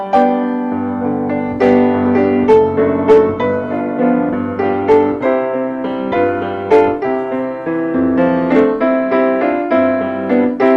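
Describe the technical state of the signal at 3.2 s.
At 3.2 s the signal is intact, with no audible technical fault in the sound at that moment.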